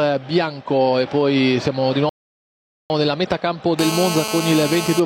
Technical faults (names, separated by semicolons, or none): rebuffering stall; GSM phone buzz